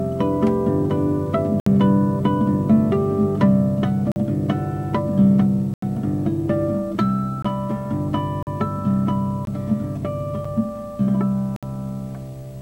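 Blocks of digital silence cut the audio at 1.60–1.66 s, 4.12–4.16 s, 5.74–5.82 s, 7.42–7.45 s, 8.43–8.47 s, 9.45–9.47 s, 10.45 s and 11.56–11.63 s. Each drops abruptly to silence and back. The gaps are 64, 43, 85, 21, 43, 21, 8 and 64 ms. The shortest sounds like a tick, and the longest like a brief hole. The recurring lengths fit buffers of 1024, 2048 and 4096 samples left unfilled in time.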